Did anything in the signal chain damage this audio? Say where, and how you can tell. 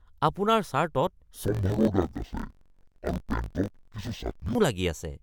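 Yes. From 1.46 s to 4.55 s the speech drops an octave, sounds doubled and choppy, and breaks up at a block rate of about 46 Hz. That is interleaved audio read as planar, introduced at the driver or buffer stage. Each block lasts 21.77 ms. Alternating left and right samples were split into halves, so each channel plays at half speed. The pitch falls 12 semitones, while the pacing still holds.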